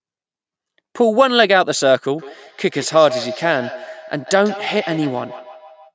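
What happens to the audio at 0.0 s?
At 0.0 s the speech is intact, having passed only through ordinary call microphone processing that trims the lowest bass and carries nothing above 8 kHz.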